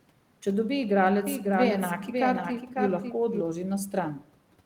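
From 1.27 s to 3.41 s, a doubled audio track appears. A second full-band copy trails about half a second behind, somewhat quieter. It has no decay or room colour and cuts in and out abruptly. A slower second capture path is the likely cause.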